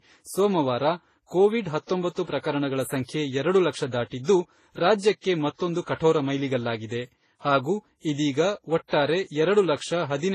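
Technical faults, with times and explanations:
Throughout, transcoding between lossy codecs: doubled-up artefacts with nothing above 14.1 kHz, likely from a low-bitrate MP3 re-encoded to low-bitrate Vorbis.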